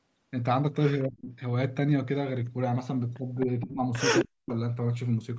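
Echo leak at 1.03 to 1.09 s: a faint copy of the speech returns about a quarter-second late, roughly 30 dB below the talker, likely because a loudspeaker-side echo canceller let some of its microphone pickup through and sent it back.

Speech suppressed in double talk follows at 1.09 to 1.32 s: the talker's level plunges by around 30 dB for about 200 ms. This is likely the canceller mistaking overlapping speech for echo and ducking everything.

Echo leak recurs at 3.40 to 3.45 s, about 25 dB down, and again at 3.61 to 3.74 s, where the delayed copy is only about 15 dB below. The same 262 ms delay points to the same leaking path.

Speech suppressed in double talk at 3.64 to 3.81 s overlaps that echo. The voice dips by about 15 dB for roughly 150 ms, likely as the canceller turns down the talker along with the loudspeaker echo it cannot separate.

Echo leak at 4.19 to 4.25 s brings another scrap about 20 dB down.

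Speech suppressed in double talk at 4.24 to 4.52 s is the deepest cut, roughly 40 dB over about 300 ms. The talker nearly vanishes, likely through the same overlap-triggered ducking.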